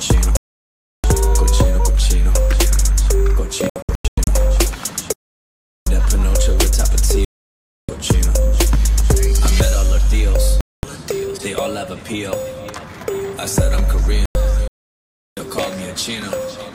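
The audio has repeated digital broadcast dropouts: mutes at 0.37–1.04 s, 3.70–4.28 s (several short holes, the longest about 0.1 s), 7.25–7.89 s, 10.61–10.84 s and 14.26–14.36 s. The receiver silenced failed frames, and the hole lengths fit frames of about 32 ms; the material sent in those gaps is gone. Separately, the output goes silent for about 0.74 s at 5.13–5.87 s and about 0.69 s at 14.68–15.37 s, then continues, a playback stall likely caused by the player running out of buffered data.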